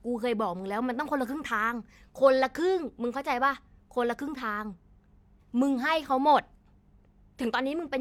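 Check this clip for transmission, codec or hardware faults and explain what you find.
Nothing in the speech points to a transmission, codec or hardware problem: the signal holds steady and continuous throughout, with no audible disturbance.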